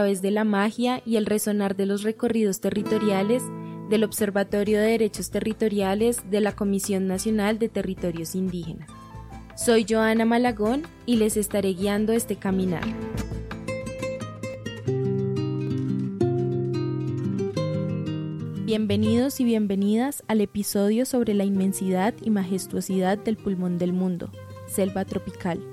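Three sharp, isolated clicks land at 14.54 s, 15.67 s and 17.57 s. Each is most likely dropped samples: a fraction of a millisecond goes missing, so the waveform jumps abruptly to a later value, leaving a brief vertical streak across the spectrum.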